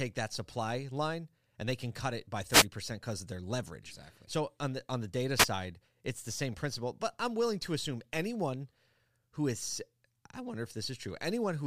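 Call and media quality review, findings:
Wireless microphone noise hits, speech. Short static bursts at 2.49–2.66 s, after "can cut it by", and 5.38–5.46 s, after "the on the data". FM radio link fading, receiver noise rising.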